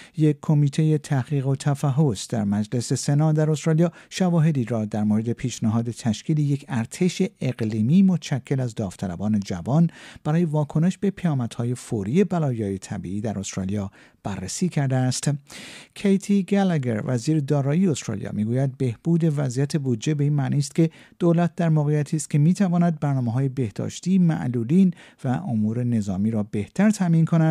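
No technical faults can be heard anywhere in the clip. Nothing interrupts or degrades the audio at any point.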